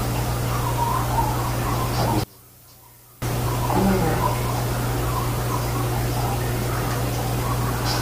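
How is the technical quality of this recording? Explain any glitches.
The recording has one clear glitch. From 2.24 to 3.22 s the sound collapses to a faint residue, dropping about 25 dB, then returns intact. The likely cause is one channel inverted: with one stereo side's polarity reversed, everything common to both channels cancels when summed to mono.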